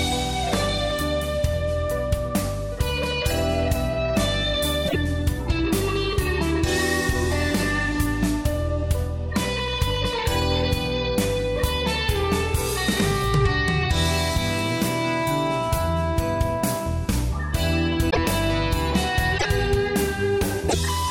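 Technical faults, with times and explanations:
4.87–4.96 s, 18.09–18.18 s, 19.37–19.46 s, 20.68–20.75 s: broken MP3 bit reservoir. Each event is a 70–85 ms glitch where the sound jumps ahead and then gives a brief garbled stretch. This likely happens because missing frames leave the following ones reading borrowed bits from the wrong data. The length fits about three 26.1 ms frames. On a spectrogram, each shows as a short, smeared disturbance. On the waveform, it appears as a discontinuity with a ragged stretch.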